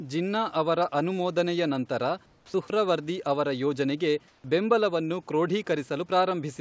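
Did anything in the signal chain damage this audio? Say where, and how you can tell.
Yes. Comfort noise in place of the background appears twice in the pauses, from 2.26 to 2.54 s right after "ಜಿನ್ನಾ ಅವರ ಅನುಮೋದನೆಯ ನಂತರ", and from 4.28 to 4.44 s. The room tone, about 36 dB below the loud parts, turns into a flat, featureless hiss, about 6 dB and about 2 dB quieter. On a spectrogram these stretches look smooth and even, with no texture, up to the 8 kHz ceiling. This is likely call-processing discontinuous transmission, with the receiver generating synthetic noise during silence.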